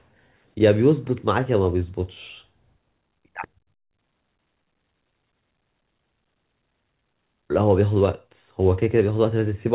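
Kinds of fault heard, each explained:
Nothing here counts as a fault: the speech comes over a normal call path with A-law G.711 coding, which is why the sound stops at about 4 kHz, and that's just what that codec does.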